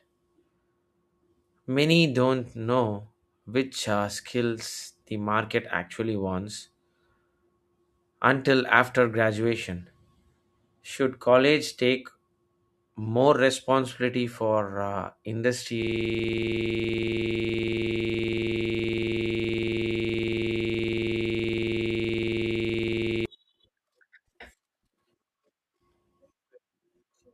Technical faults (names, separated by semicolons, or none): system hang loop